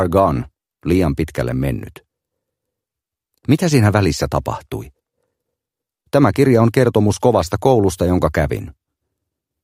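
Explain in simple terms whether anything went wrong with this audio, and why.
Nothing went wrong; no problems can be heard.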